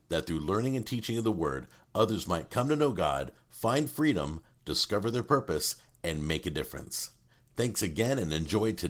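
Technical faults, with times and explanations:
Nothing here counts as a technical fault; the speech has simply passed through Opus voice compression at 20 kbps in hybrid mode with the full band kept, which leaves only light traces of the coding.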